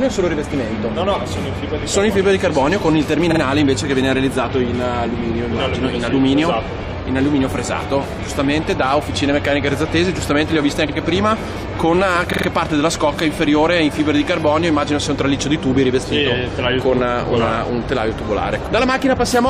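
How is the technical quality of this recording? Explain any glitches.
The recording has a repeated-frames fault: at three points a short run of compressed frames was delivered more than once, so the decoder played the same 46.4 ms block again. At 3.31 s it repeats twice, adding 92.9 ms; at 10.88 s once, adding 46.4 ms; at 12.32 s three times, adding 139.3 ms. A block that size fits two frames. Each spot is heard as a brief stutter.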